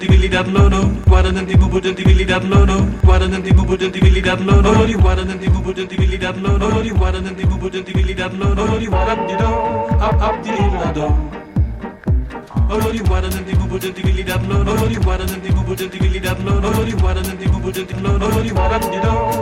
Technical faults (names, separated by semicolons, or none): CD skip